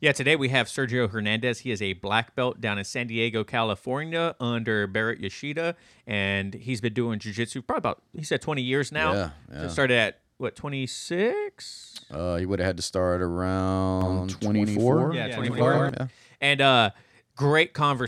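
Speech, with a doubled audio track from 14.01 to 15.89 s: a second, full-band copy of the sound trails the original by about 150 ms, sitting roughly 5 dB lower. Unlike a room echo or reverb, the copy has no decay tail and no room colouring, and it starts and stops abruptly at those times. The likely cause is the same signal being captured again through a slower path, or an edit leaving two copies out of step.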